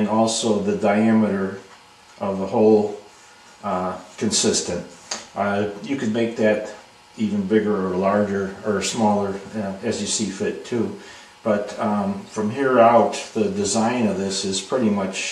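No technical faults are audible.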